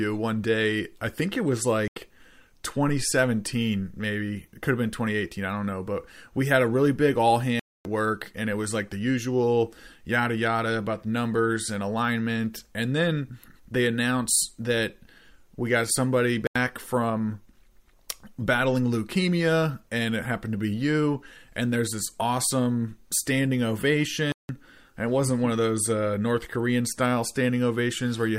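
At 1.88, 7.60, 16.47 and 24.32 s the speech drops into a block of digital silence, lasting 85, 256, 85 and 171 ms. The buffer likely went unfilled, so zeros replaced samples. Each hole cuts out and back in with no fade. The 85 ms gaps fit 4096-sample blocks.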